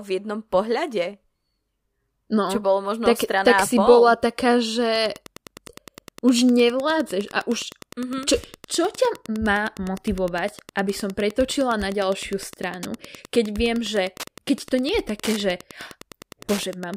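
From 4.92 s to the end, Wi-Fi interference sits under the speech. A nearby Wi-Fi radio is coupling into the audio circuit, which rectifies its transmissions into audible clicks. The beacon repeats every 102.4 ms. That gives a steady ticking close to ten times a second. It stays well below the speech, roughly 20 dB down.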